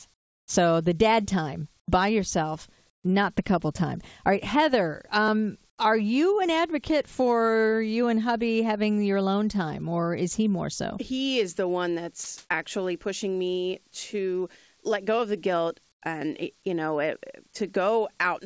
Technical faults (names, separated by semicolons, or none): comfort noise in place of the background; sound dropped by the voice detector